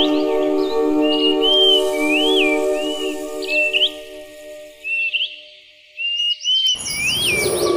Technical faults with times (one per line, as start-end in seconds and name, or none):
4.44 bit error spike
6.67 bit error spike